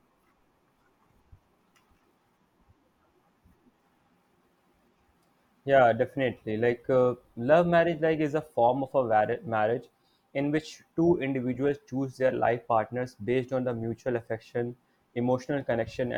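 No technical faults can be heard anywhere in the speech recording.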